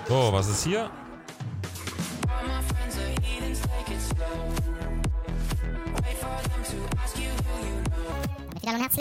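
From 8.12 s onward, a section at the wrong speed runs 1.69 times fast and sounds high and hurried, raised about ten semitones, likely from a mismatched playback clock.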